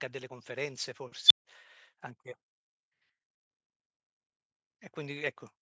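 A speech clip, band-limited to nothing above 8 kHz by call microphone processing. At 1.25 s an unstable filter takes over. A high squeal of roughly 4 kHz swells to full level in about 50 ms and clips hard. Then the sound drops out, and about 150 ms of silence follows before it returns near 1.45 s. The cause is a recursive filter running with bad coefficients. Its output grew until the numbers overflowed, and the filter had to reset.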